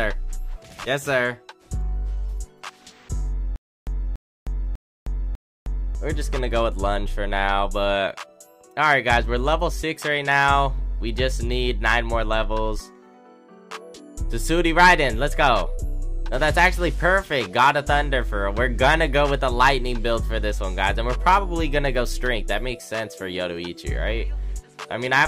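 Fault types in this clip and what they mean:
Stutter with silent gaps: from 3.56 to 5.95 s the same short burst of sound, about 287 ms long, plays four times over, each repeat followed by roughly 310 ms of dead digital silence, so it pulses at an even rate of one repeat every 0.6 s. The likely cause is a player or stream that stalled and, at each retry, replayed its last fragment before running dry, so the audio due in that stretch never arrives.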